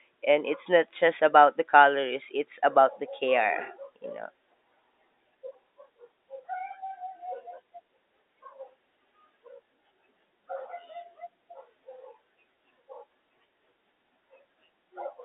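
No technical faults can be heard in the speech. It has the narrow band of an ordinary G.711 telephone line, about 200 Hz to 3.7 kHz, which fits 64 kbps mu-law coding.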